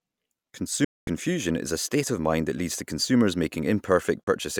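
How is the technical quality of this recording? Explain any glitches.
Two digital broadcast dropouts break up the speech. From 0.84 to 1.08 s the sound fades out in about 3 ms and goes silent for 224 ms, returning on "is a state of". A shorter 32 ms hole follows at 4.24 s. In each case the receiver lost the signal or rejected corrupted frames and muted until clean ones arrived. The gap lengths fit blocks of roughly 32 ms frames, so whatever was broadcast during them is gone.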